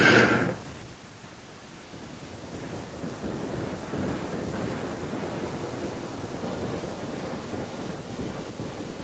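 Echo leak in this speech at 1.46–2.32 s, 4.14–4.34 s and from 4.74 s to the end: a copy about 0.4 s late, faint at first, then nearly as loud, likely an echo canceller missing loudspeaker pickup.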